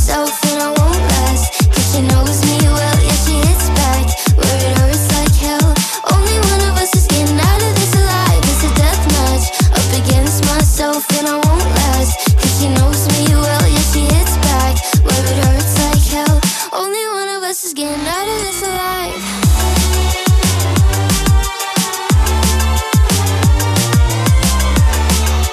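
No technical faults can be heard anywhere in the audio, and the signal stays steady and intact throughout.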